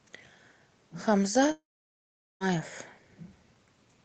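Speech that cuts out partway through, a long network dropout from about 1.51 s to 2.43 s. Roughly 0.9 s of audio never arrives. The last sound smears into a short fading buzz, then about 0.8 s is near silence before speech picks up again with that stretch simply gone. It's likely the receiver's concealment filling a gap in packet delivery. Around it you can hear the call codec's band limit, with nothing above 8 kHz.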